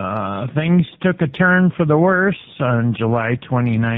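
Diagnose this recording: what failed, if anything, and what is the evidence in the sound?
The fault is tandem speech coding, a codec-stage failure present for the whole clip. The band stops at about 3.8 kHz throughout, which points to a narrowband telephone path. The speech carries roughness and a muffled, warbly colouring. That fits two model-based coders in a row, likely a GSM full-rate 13 kbit/s link, then G.711 A-law, then AMR-NB at 7.95 kbit/s. At each border the audio was decoded and re-encoded. The second coder modelled the first one's errors and added its own.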